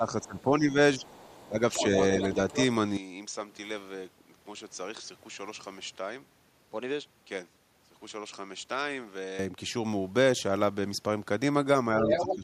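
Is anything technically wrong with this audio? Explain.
Yes. At 0.0–1.03 s, 1.47–1.59 s and 12.02–12.44 s there is speech suppressed in double talk. The echo canceller likely could not separate the talker from overlapping far-end echo, so it pulled the voice down, by up to roughly 15 dB, in brief dips.

At 0.22–0.42 s, 0.99–1.87 s, 2.21–2.66 s and 12.02–12.36 s, the other side's voice is leaking through. The canceller likely left residual loudspeaker echo in the microphone signal. It is faint at first, clearly audible in the middle two stretches, and about as loud as the talker at the end.

From 2.97 s to 9.39 s, the input switched to a poorer device. The system likely changed microphones mid-recording. With no gap at the switch, the sound turns duller. It also drops around 10 dB in level and carries a faint new noise floor.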